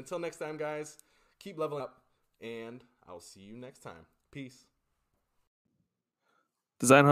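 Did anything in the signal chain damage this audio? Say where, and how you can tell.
Yes. Compressed frames skipped at 1.79 s, a codec-stage fault. About 150 ms of speech vanishes, which fits several 23 ms frames. The waveform jumps abruptly ahead at the join.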